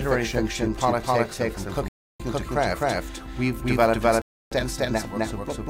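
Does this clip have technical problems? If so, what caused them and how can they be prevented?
Yes. Throughout the clip every sound is heard twice: a second, equally loud full-band copy trails about 0.3 s behind, dry and without any room decay. This doubled audio track is likely from the same signal being captured again through a slower path, or from two unaligned copies left in an edit. Routing each source through a single capture path and muting duplicate tracks prevents it.

The sound also cuts to silence from 1.88 to 2.20 s and from 4.22 to 4.52 s, then resumes exactly where it left off. These rebuffering stalls come from the player running out of downloaded audio and waiting for more, adding 314 ms and 299 ms without losing any material. A larger playback buffer or a lower streaming bitrate prevents them.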